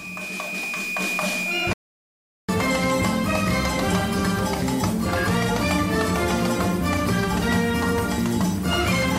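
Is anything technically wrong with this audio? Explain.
Yes. From 1.73 to 2.49 s there is an audio dropout to silence. The input signal was likely lost briefly while recording carried on writing silence. The sound cuts off abruptly, leaving 0.75 s of complete silence with no room tone, then resumes mid-flow.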